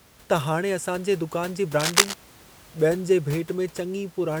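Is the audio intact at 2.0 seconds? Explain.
No. From 1.80 to 2.14 s, cable scratch noise covers the speech. Dense, uneven bursts of scratching and rustling sit at roughly the same level as the speech. The likely cause is a worn cable or connector being moved, making its contact resistance jump rapidly.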